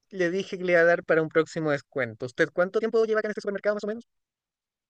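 At 2.74 s the speech abruptly doubles in pace, and it stays that way to the end of the clip at 4.90 s. The pitch does not rise with it. This is a time-stretched section, running at 2.0 times the original speed. Software likely squeezed this part to fit a shorter length, dropping short slices of the sound to hold the pitch steady. The result sounds rushed.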